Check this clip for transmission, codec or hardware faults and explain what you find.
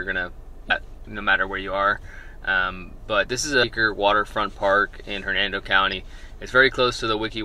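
Three brief faults of damaged data in a compressed stream occur at 0.67–0.71 s, 3.59–3.64 s and 5.89–5.94 s. At each point corrupted bytes make the decoder misread frames and hunt for the next valid header, producing a short chirp, squawk, click or hole about 44 ms long. On a spectrogram and the waveform each shows as an abrupt, brief discontinuity.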